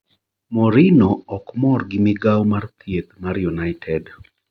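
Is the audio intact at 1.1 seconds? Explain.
No. At 1.1 seconds the speech is inside a Bluetooth SBC bit pool drop running from 0.94 to 2.39 s. The phone cut the bits per frame on a congested link, which fits a bit pool falling from 28 to 10, near 84 kbps. The top sub-bands are starved and the rest coarsely quantised, so the treble dulls and gritty noise rises. Unlike a plain low-pass filter, the dulling brings audible grain, and both clear together when the rate recovers.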